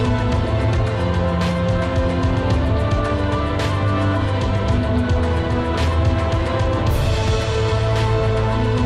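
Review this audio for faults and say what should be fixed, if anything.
MP2 compression damage runs the whole way through: dull top end, gurgly grain, bands flickering out. That's likely Layer II starved of bits, which fits around 80 kbps. Encode from the original at a higher bitrate, or use a better codec.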